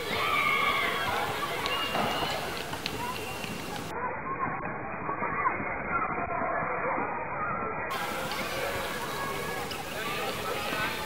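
From start to finish, the audio carries a distortion that never lets up, and even the quietest moments are filled with a gritty noise floor rather than falling silent. This is most likely a stuck bit, where one data bit stays fixed at 0 or 1 because of a faulty line or converter. Roughly half the sample values land off by that bit's weight, so the error follows the waveform and turns into distortion. Near silence, the stuck bit keeps flipping with the sign of small values, which fills pauses with noise.

From 3.91 s to 7.91 s, an adaptive stream switches to a lower bitrate, probably because the connection slowed. The change in quality is abrupt and there is no gap. For those four seconds nothing above 2.5 kHz survives, so the sound turns dull and muffled, and coding artefacts rise, all of which points to a drop from a comfortable AAC rate to something near 12 kbit/s. At 7.91 s the fuller treble returns just as suddenly.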